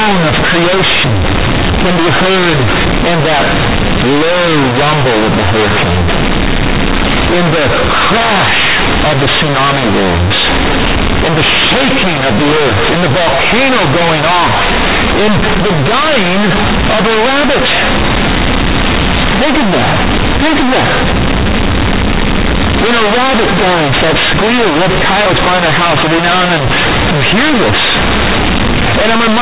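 From start to finish the speech carries one fault: companded audio read as linear. The samples were A-law coded, but playback treats each byte as a plain linear 8-bit value and skips the expansion step. The logarithmic scale is lost and every sign change jumps across roughly half the output range, so quiet passages come out as loud as peaks. The result is harsh, buzzy, heavily distorted sound, with loud noise filling the pauses. The underlying 8 kHz G.711 telephone coding still shows in the narrow band, with nothing above 4 kHz.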